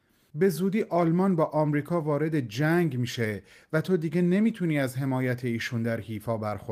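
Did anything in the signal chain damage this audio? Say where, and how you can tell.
No, nothing in the signal chain damaged this audio.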